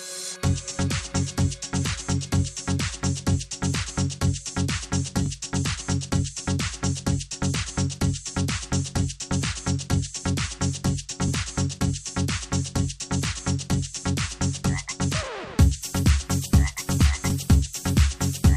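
At 5.26 s there is a short stutter from overlapping chunks: a new 6.0 s chunk began before the previous one finished, so about 20 ms of sound plays twice at the join. The doubled fragment, rather than a gap, distinguishes it from a dropout.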